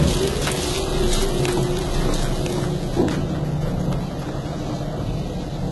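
A doubled audio track runs from the start to 3.02 s, already under way as the clip opens. A second full-band copy trails about a second behind, a few decibels quieter, dry and without room colour, then cuts off abruptly. The likely cause is the same audio being captured again through a slower path.

HE-AAC compression affects the whole clip, with nothing above 11.8 kHz. The treble is rebuilt from copied lower bands rather than coded directly, so it sounds gritty and metallic. The heavy damage likely points to a bitrate around 16 kbps.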